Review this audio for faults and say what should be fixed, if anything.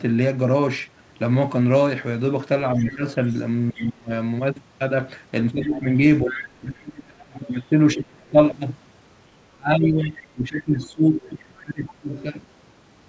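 Speech suppressed in double talk occurs three times, at 2.76 to 4.11 s, 5.66 to 8.36 s and 9.53 to 12.1 s. The speech dips by as much as about 30, 35 and 20 dB in those spans. It loses about half a second, about one and a half seconds and about two seconds in total. The likely cause is an echo canceller that could not separate the local talker from the loudspeaker echo, so it turned both down.

The other side's voice leaking through is heard at 2.8 to 3.34 s, 5.62 to 6.45 s, 7.46 to 8.32 s, 10.05 to 10.27 s and 11.23 to 12.23 s. It sits around 20, 15, 25, 25 and 25 dB below the main speech, as faint scraps and stretches. It likely comes from the far end playing on a loudspeaker and not being fully cancelled at the microphone. Nothing above 8 kHz comes through, which fits a G.722 call path at 64 kbps.

Using a headset, or tuning the echo canceller for better double-talk detection and deeper echo removal, would prevent both faults.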